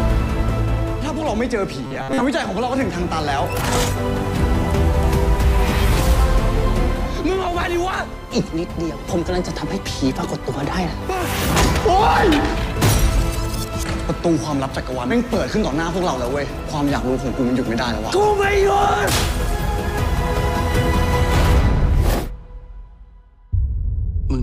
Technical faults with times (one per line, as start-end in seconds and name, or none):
1.87-2.23 robotic sound from repeated short buffers